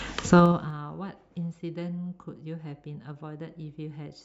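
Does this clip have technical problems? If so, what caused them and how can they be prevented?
Yes. From 0.30 to 0.77 s there is zipper noise while the speech level falls. The level drops by roughly 20 dB. It falls in coarse steps of about 3 dB instead of a smooth ramp. Each jump puts a small click into the waveform. At around 15 steps a second, the clicks merge into a ticking, zipping texture over the speech. To prevent it, interpolate gain changes per sample so each move ramps smoothly.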